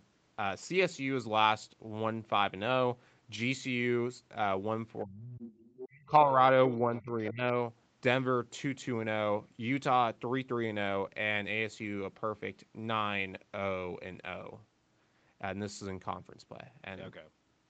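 From 5.03 to 5.52 s the echo canceller likely could not separate the talker from the far end's loudspeaker signal while both sides spoke, and pulled the level down hard. This is speech suppressed in double talk, and the talker's speech sinks by roughly 35 dB for about half a second, nearly vanishing.

Right after, from 5.61 to 6.06 s, the other side's voice is leaking through: residual echo the canceller likely failed to remove sits about 15 dB under the talker, a faint second voice behind the speech.

The suppression then returns in two more dips that are likely caused by the same double-talk confusion. From 6.07 to 6.38 s it is shallow, only about 5 dB, heard as a slight sag. From 6.81 to 7.45 s it deepens to around 20 dB, so the speech thins and ducks in pieces. Within that dip, at 7.25 to 7.31 s, a brief scrap of the other side's voice likely slips past the canceller, again about 15 dB down. 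The call's microphone processing passes nothing above 8 kHz throughout.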